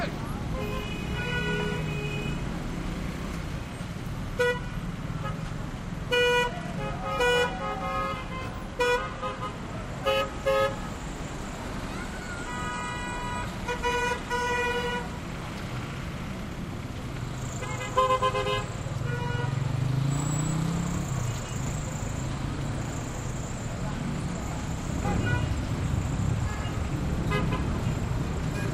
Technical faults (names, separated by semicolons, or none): none